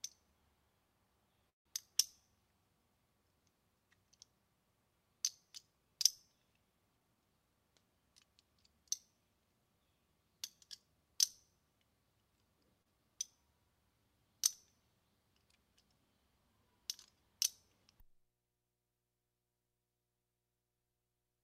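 At 1.49 s the audio hangs for about 160 ms, through 1.67 s, and most of that, roughly 150 ms, is plain silence. Then it picks up right where it stopped with nothing lost. That's likely a call audio freeze, with packets held up until the jitter buffer ran dry.

From 6.97 to 7.38 s there's a jitter buffer speed-up. The receiver had more buffered than it wanted, so it trimmed out small pitch-period slices, around 70 ms in total. Playback runs at about 116% speed with the pitch unchanged, so it sounds briefly hurried.

At 12.82 s there's a short stall from a late packet. The packet missed its slot, so the last sound got stretched by about 30 ms until it showed up, then playback carried on. Nothing's missing, just a sound held a touch too long.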